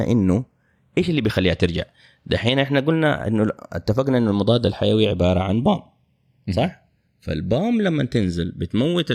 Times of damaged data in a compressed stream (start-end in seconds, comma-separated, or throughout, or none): none